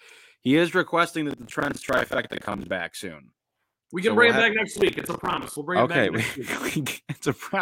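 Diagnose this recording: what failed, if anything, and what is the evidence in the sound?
The failure is at the driver and buffer stage: processor overload crackle. Two bursts of gritty, tearing crackle ride on the speech, from 1.31 to 2.71 s and from 4.73 to 5.56 s. Each burst stops cleanly once the load passes. The processor could not finish its audio buffers on time, and dozens of deadlines were missed again and again. Each miss replayed a stale fragment of around 10 ms with hard edges. Strung together, these fragments make the crackle.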